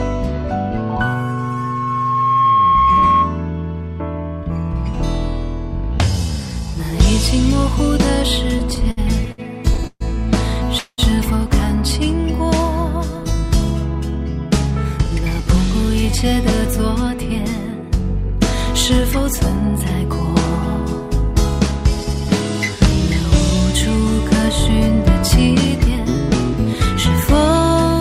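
From 0.77 to 3.44 s a microphone is picking up the loudspeaker it feeds, and the loop gain passes unity at 1.1 kHz: a loudspeaker feedback squeal. The tone swells over roughly a second and a half until it sits around 5 dB above the wanted sound.

Between 8.59 and 10.02 s packets keep arriving late, so the jitter buffer drains again and again, giving repeated stalls (stutter). Eleven brief holds, the longest 134 ms and 330 ms in all, stretch the passage so it drags and stutters, with nothing dropped.

At 10.78 to 11.00 s the sound halts for 195 ms, the last moment carried on as a fading buzz that ends in 70 ms of silence before the audio resumes where it stopped. This call audio freeze was likely caused by packets held up in transit.

From 14.71 to 19.84 s, then 21.71 to 22.21 s and 26.65 to 27.18 s, the jitter buffer holds too much audio and trims pitch-period slices to catch up. This jitter buffer speed-up runs the sound at 103%, 107% and 105% at unchanged pitch, removing about 150, 50 and 40 ms, so the 107% and 105% stretches sound hurried.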